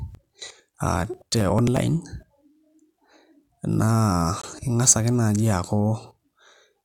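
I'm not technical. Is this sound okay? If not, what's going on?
No. From 0.15 to 1.77 s there are periodic USB or driver dropouts: about twenty tiny skips, roughly every 0.09 s, so the speech ticks with an even, clock-like beat rather than random crackle. At 4.42 s the sound cuts to silence once for 20 ms and then resumes, a single gap that is likely a Bluetooth stall, not a repeating pattern.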